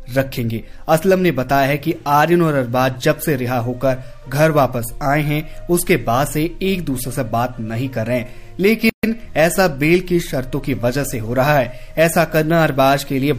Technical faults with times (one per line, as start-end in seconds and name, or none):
8.89-9.03 gap at a join of encoded pieces